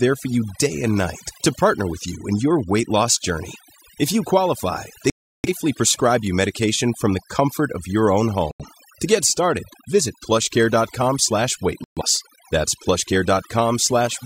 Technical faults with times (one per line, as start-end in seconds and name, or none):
0.00-14.25 overdone noise removal
5.10-5.49 digital broadcast dropout
8.51-8.66 digital broadcast dropout
11.84-12.02 digital broadcast dropout